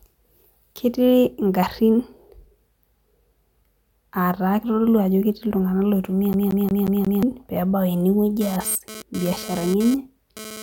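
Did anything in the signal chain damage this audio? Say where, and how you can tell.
Yes. A CD stuck on one turn damages the speech from 6.33 to 7.23 s. This is a playback fault at the disc drive. The same slice of about 0.18 s (179 ms) plays five times, each pass cut off by a brief mute, which gives a fast, even stutter. A scratch at one point on the disc keeps sending the laser back a track. Each revolution then lands on the same stretch of audio and replays it.

GSM phone buzz enters the analogue wiring from 8.41 s to the end of the clip. A hard, raspy buzz at about 217 Hz, rich in harmonics, sits about 14 dB below the speech and has no relation to it. It comes and goes rather than holding steady, so a nearby 2G phone was likely transferring data. Its bursts of radio energy get rectified in the audio circuitry and become audible pulses at the burst rate.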